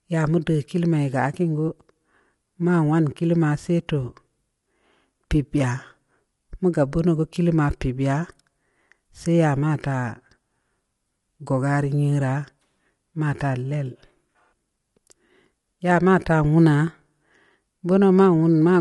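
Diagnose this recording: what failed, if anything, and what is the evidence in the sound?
The codec stage is at fault: the speech was most likely squeezed through low-delay AAC compression of the AAC-ELD kind used on video calls, at a rate that fits roughly 32 kbps. At that low bitrate the voice's pitch harmonics are coded too coarsely, so from start to finish the speech sounds rough and grainy, with noise filling the gaps between harmonics. The damage is plainly audible, and nothing survives above 11.5 kHz, leaving the top band dull.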